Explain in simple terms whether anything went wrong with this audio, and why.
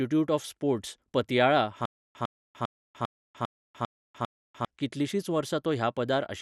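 The speech sounds dull and plainly gurgly all the way through, with nothing above about 13.6 kHz. This is MP2 compression, likely from too few bits, so upper bands drop out.

From 1.85 to 4.65 s, right after "ऑफ स्पोर्ट्स् पतियाळा", a tiny 0.1 s snippet repeats seven times, each followed by 0.3 s of silence. This stutter with silent gaps likely comes from a stalling stream replaying its last fragment, and the speech that should have played there is lost.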